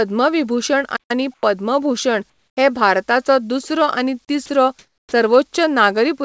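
At 0.96 s the speech cuts out in mid-flow. Silence holds until 1.11 s, about 135 ms. This is a playback stall. The likely cause is a player that ran short of data or had its output thread blocked. Sound resumes once it recovers. The gap is hard and dead, not a fade, so it reads as a break in delivery rather than a pause by the talker.

Comfort noise in place of the background follows, in three stretches. The first runs from 1.34 to 1.43 s, 90 ms. The level barely changes, but the room tone loses its texture. The second runs from 2.30 to 2.57 s, 270 ms, and drops by about 10 dB. The third runs from 4.79 to 5.12 s, 330 ms, and sits about 5 dB lower. The real background here is around 43 to 46 dB below the loudest speech. The sender's voice detector likely judged these gaps as silence and stopped transmitting. The receiver then filled them with flat, featureless synthetic noise.

From 4.46 to 4.49 s, sound is dropped by the voice detector. 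About 30 ms of speech is lost. The detector likely took that quiet fragment for background. Steady noise briefly replaces it.

Then the onset is clipped by the voice detector, from 5.07 to 5.12 s. The detector likely reacted late to the return of speech, so the first 50 ms were never sent. That span falls inside the last comfort-noise stretch. The next sound therefore starts abruptly, with no soft attack. It jumps straight out of the synthetic hiss.

Throughout, nothing is heard above 8 kHz. That fits the G.722 wideband call path at 64 kbps, which carries the audio as normal.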